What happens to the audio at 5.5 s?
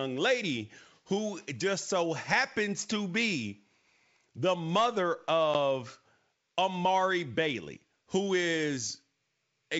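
Just after "the mother", packet loss on this ADPCM call cuts a hard-edged silent gap from 5.54 to 5.56 s, about one packet or 10 ms of audio. The decoder's predictor and step size lose sync with the G.722 sender, so speech resumes slightly distorted before settling.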